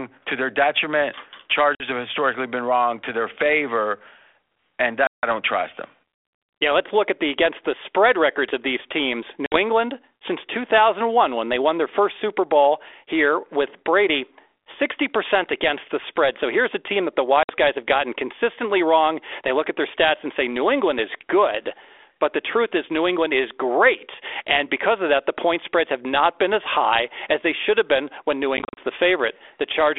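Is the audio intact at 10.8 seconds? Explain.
Yes, the speech at 10.8 s is intact, with nothing breaking into the 32 kbit/s G.726 ADPCM telephone path, which keeps its usual 300 Hz to 3.5 kHz band.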